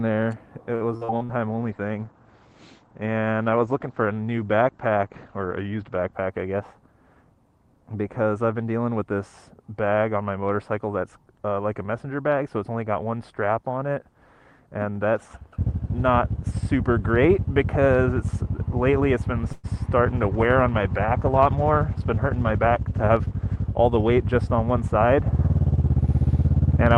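From 0.75 to 1.32 s the sound turns choppy and robotic, with pieces missing. This is repeated packet loss: five separate holes, the longest 52 ms, were each patched by stretching the previous sound, so about 38% of this stretch is concealment rather than real audio.

From 1.53 to 6.19 s the audio goes rough and muffled. In this call bitrate drop, the encoder was pushed from 32 kbps down to 14 kbps, coding more coarsely and cutting the bandwidth from 20 kHz to 8 kHz, so the top end disappears.

Between 6.54 and 6.82 s the sound briefly rushes ahead at about 115% speed without any change in pitch. This is a jitter buffer speed-up: to cut excess delay, the receiver snipped out short pitch-period pieces, around 50 ms in total.

At 19.52 s there is a 118 ms call audio freeze. The last sound carries on as a fading buzz or hiss before the audio resumes exactly where it left off, so nothing is lost and a small gap is inserted. 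The likely cause is packets held up in transit that drained the jitter buffer.

A second call bitrate drop runs from 20.08 to 23.76 s, from 32 kbps to 18 kbps, and brings back a coarser, watery texture. Overlapping it, from 21.56 to 23.33 s, a gentler jitter buffer speed-up at 105% trims roughly a tenth of a second, leaving the sound subtly hurried.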